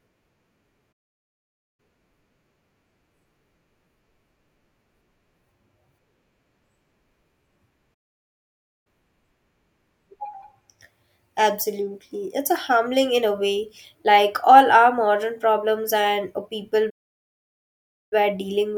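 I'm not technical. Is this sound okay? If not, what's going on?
No. The speech cuts out into silence three times and then carries on: at 0.92 to 1.80 s, at 7.94 to 8.87 s, and at 16.89 to 18.13 s, right after "modern problems and people" and before "were dealing with the". The gaps last about 0.9, 0.9 and 1.2 seconds. This is a playback stall. The player likely ran short of incoming audio, or got held up, and went quiet until it caught up.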